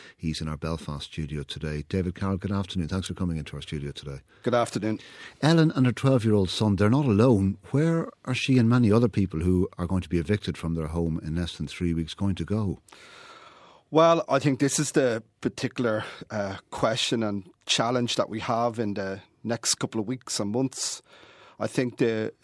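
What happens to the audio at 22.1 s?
At 22.1 s the speech carries on intact, with no dropout, click, distortion or other fault at that moment.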